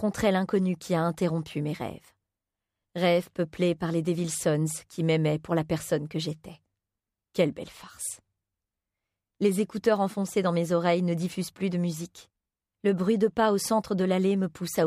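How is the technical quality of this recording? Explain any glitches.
No glitches: nothing in the recording points to a technical fault anywhere along the signal chain.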